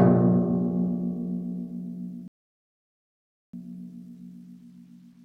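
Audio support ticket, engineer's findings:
Music playback drops to silence at 2.28 s, silent until 3.54 s. Rebuffering stall, roughly 1.26 s of added time. Playback resumes at the exact point of interruption; no material skipped or repeated. Probable component: streaming player buffer. Mechanism: downloaded audio exhausted faster than network delivery refilled it, so output halted until enough data arrived to continue. Check network throughput and player buffer sizing during the stall window.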